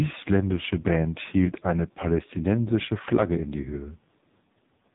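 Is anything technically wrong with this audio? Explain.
Yes. Throughout the speech, the sound carries the damage of the AMR narrowband mobile codec. Nothing passes above about 3.8 kHz. The codec rebuilds the voice from a vocal-tract model driven by a few pulses per short frame, and here the damage is heavy, with a buzzy, synthetic timbre that points to one of its lowest bitrates, around 5 kbps. That rebuilt, artificial quality is what separates it from simple telephone-style band-limiting, which only removes the highs.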